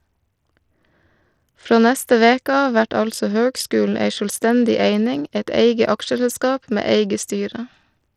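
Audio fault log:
Throughout: Bluetooth SBC compression. The speech has dull, flickering treble and a gritty grain with aliasing, plainly audible. This fits a starved bit pool, likely an SBC link near 80 kbps, which leaves the upper sub-bands few bits and the rest coarsely quantised.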